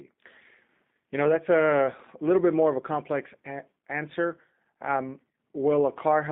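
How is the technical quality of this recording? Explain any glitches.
The quality is limited by one fault present throughout: the speech has passed through the G.729 codec. The codec rebuilds each 10 ms frame from a vocal tract filter, pitch prediction and a few pulses, which fits an 8 kbit/s stream, and keeps only about 200 Hz to 3.6 kHz. The speech sounds narrow, slightly rough and synthetic, with plainly audible codec damage.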